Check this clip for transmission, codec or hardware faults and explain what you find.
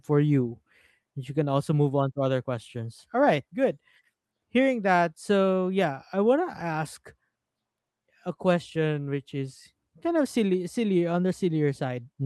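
No transmission, codec or hardware faults turn up anywhere in this clip.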